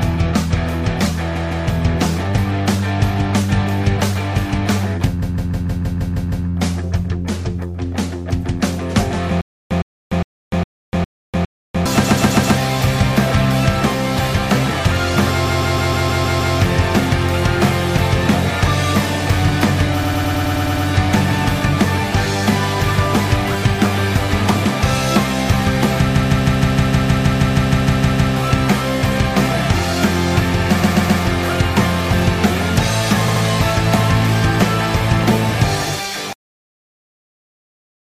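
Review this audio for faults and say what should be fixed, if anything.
Repeated frames occur at 1.35, 5.21, 12.03, 15.45, 20.03, 26.14, 30.81 and 33.27 s. Each time, a block of about 78 to 157 ms replays, for up to 2.2 s. That fits runs of three to six compressed frames being written more than once. Check the writer or transport for duplicate frames.

A stutter with silent gaps runs from 9.41 to 11.86 s. The same 111 ms burst returns six times, every 408 ms, with 296 ms of silence between. The player likely stalled and retried. The sound from that span is lost. Buffer more deeply before playback resumes.

The end is cut off at 36.33 s. The sound stops mid-event and drops straight into digital silence. The final buffers were never written. Flush and close the output fully before finishing the file.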